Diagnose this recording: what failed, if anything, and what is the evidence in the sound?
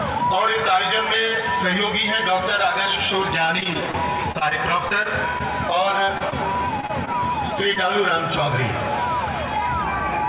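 Two stretches turn choppy and robotic, from 3.46 to 5.42 s and again from 6.06 to 7.78 s. The sound breaks into short fragments, with holes of up to about 28 ms and 24 ms. This is repeated packet loss (robotic sound) on the network. Packets kept arriving lost or late, and each hole was patched by stretching the last sound before the next loss hit. The audio above 4 kHz is gone, which fits a G.711 call path.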